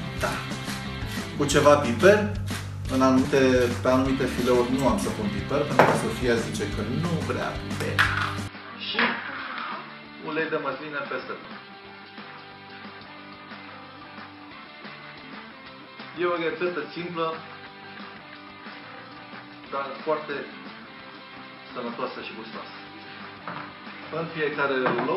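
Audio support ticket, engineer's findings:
Compressed frames skipped at 3.24 s, 11.44 s, 15.23 s and 21.32 s: the audio jumps ahead by roughly 150 to 200 ms, which fits several 26.1 ms frames lost or rejected by the decoder. The overlapped joins give a smeared blip, not a hard click or a silent gap.

Input switched to a poorer device from 8.48 s to the end: sudden dull tone with nothing above 5.3 kHz, level about 5 dB lower, new noise far below the signal, and no silence at the change. Likely a microphone or headset-profile change, not a codec low-pass, since level and noise floor shift too.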